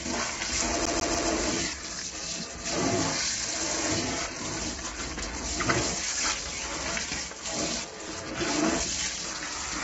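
CD stuck on one turn from 0.85 to 1.29 s in this everyday-sound recording: the same 144 ms slice plays three times, each restart briefly muted, like a laser jumping back one track. Low-delay AAC compression runs throughout: the sound is grainy and rough, with nothing above 7.8 kHz, which fits AAC-ELD likely running at around 16 kbps with short frames.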